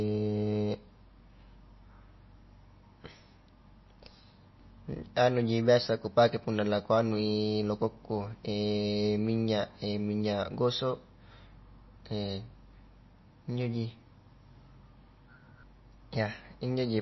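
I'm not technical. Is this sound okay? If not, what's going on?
No, not quite. All the way through, the speech has a dull, watery quality, and it's likely down to heavy MP3 compression. To save space, the encoder throws away everything above about 5.8 kHz, which is why s sounds lose their crispness. It also drops quieter details that flicker in and out from moment to moment, giving a swirly, underwater edge and softening the starts of sounds.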